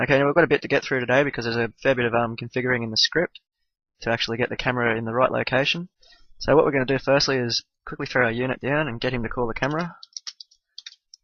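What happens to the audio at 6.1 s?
Nothing goes wrong at 6.1 s; the audio plays through that moment intact, with no dropout, click, glitch or other audible fault.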